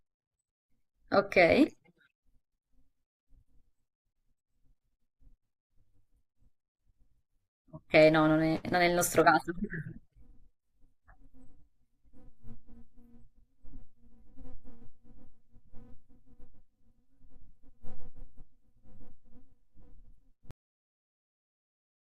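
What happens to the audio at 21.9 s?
At 21.9 s there is only flat digital silence. The speech stops abruptly at 20.51 s, mid-sound and with no natural decay, and nothing returns before the clip ends. This is a cut-off end: the final buffers were never written or played back.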